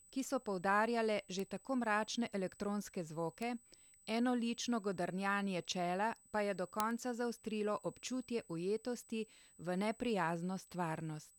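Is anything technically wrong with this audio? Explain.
Yes. A USB whine runs under the whole speech clip as a steady, fixed-pitch tone at 8 kHz, sitting about 30 dB below the speech. It comes from current drawn in 125-microsecond USB microframes leaking into the audio through the power or ground path, which puts the tone at exactly 8 kHz. It is heard as a thin, high whistle that never changes pitch. On a spectrogram it shows as an unbroken horizontal line at 8 kHz from start to end.

There are also four bit error spikes, each a single corrupted sample. They fall at 1.40 s, between "so poudarjale" and "že tako mračne elektronske"; at 3.42 s; at 6.80 s, between "čela pa je do" and "konca zaostrilo občutje ujetosti"; and at 10.10 s, just after "zaostrilo občutje ujetosti v". A flipped bit makes one sample jump by a power of two and then return. The spikes peak at about −22, −22, −10 and −40 dBFS, so the one at 6.80 s is the loudest tick and the one at 10.10 s is faint. 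Each is heard as a sharp click that has nothing to do with the speech around it. On a waveform each is a lone one-sample needle, and on a spectrogram a thin vertical line spanning all frequencies.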